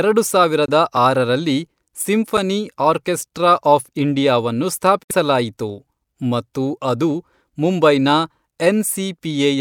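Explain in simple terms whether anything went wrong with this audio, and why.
The speech cuts to brief silence at 0.66–0.69 s and 5.03–5.11 s, then resumes further along: a Bluetooth dropout, likely from wireless packets arriving too late.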